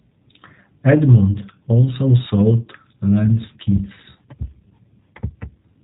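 Throughout, the speech carries plainly audible G.729 codec damage: a rough, slightly synthetic texture with nothing above 4 kHz, consistent with 8 kbit/s model-based coding. Just after "also sold lens kits", from 4.69 to 4.72 s, there is VoIP packet loss concealed by the speech codec. About 20 ms of audio, which fits a single lost packet, is replaced by an extrapolated, fading sound before the speech recovers.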